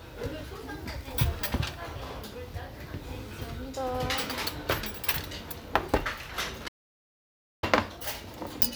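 A recording of sounds cuts abruptly to silence at 6.68 s, with no room tone beneath it, and returns mid-flow at 7.63 s. Nearly a second of sound is gone in this audio dropout to silence, likely from input lost while recording continued writing silence.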